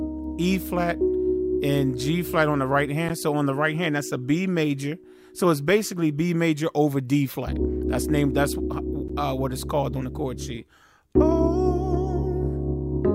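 At 3.09 s and 9.08 s, a gap between stream segments leaves about 12 ms of hard-edged silence, consistent with 2-second segments. Unlike a dropout, nothing is lost: the sound resumes exactly where it stopped.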